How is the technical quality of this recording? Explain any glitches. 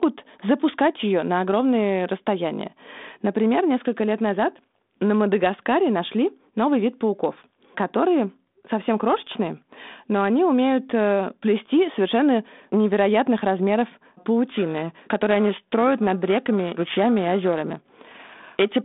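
The speech comes through a narrowband telephone channel, with nothing above about 3.8 kHz, consistent with a 32 kbit/s G.726 ADPCM link and its light coding roughness. One clear glitch appears near the end.

Periodic clock jitter runs from 14.45 s to 18.82 s. Interference at around 1 kHz is wobbling the converter's sampling clock, so every speech component picks up sidebands spaced roughly 1 kHz above and below it, stronger on the higher frequencies. The result is a rough, metallic edge on the voiced sound in that stretch, disappearing whenever the speech pauses.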